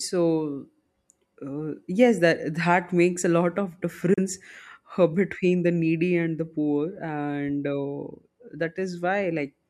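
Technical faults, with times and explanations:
4.14–4.18 s, digital broadcast dropout: the speech fades to silence over about 8 ms, stays muted for a gap of about 32 ms, then resumes further along. The receiver stopped getting usable data, from signal loss or a frame failing its checksum, and muted rather than play corrupted audio. A hole this short fits a single lost frame. The material sent during the gap is gone, so the speech jumps forward instead of pausing and continuing.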